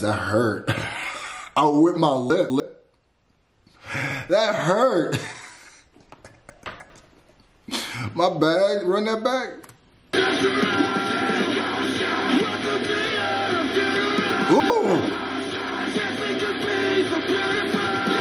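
At 2.3 to 2.6 s, 6.5 to 6.9 s and 14.3 to 14.7 s, chunks out of order jumble the sound: a 100 ms block plays two, then three, chunks late. Waveform and spectrogram show three abrupt vertical seams per event.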